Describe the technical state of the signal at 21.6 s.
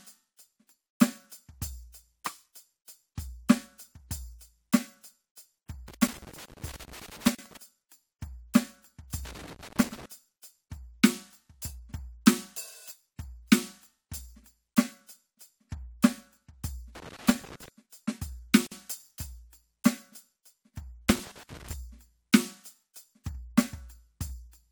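At 21.6 s the music is in the middle of a loose connector crackle, running from about 21.09 to 21.73 s. A worn or dirty contact keeps making and breaking, chopping the signal, so you get an irregular, scratchy burst of crackle.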